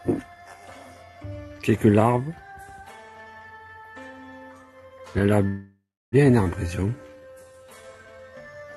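From 5.47 to 6.15 s there is a call audio freeze, most likely because packets stalled in transit and the jitter buffer ran dry. The receiver stretched the last sound into a fading buzz or hiss and then about 0.3 s of silence, inserting roughly 0.65 s of gap before the audio resumes where it left off.

At 6.44 to 6.48 s the audio jumps in a skip ahead: a stretch of about 0.4 s was discarded while later packets were already queued. The two sides of the cut are joined almost directly, so the sound lurches forward with only a tiny seam.

From 6.67 to 8.71 s comes a jitter buffer slow-down. Having just drained its reserve, the buffer rebuilt it by repeating single pitch periods over and over, adding about 0.35 s. The sound plays at 83% speed with unchanged pitch, and its sustained parts are drawn out. Throughout, the call path's band limit near 12 kHz, consistent with Opus at around 64 kbps, removes the top of the spectrum.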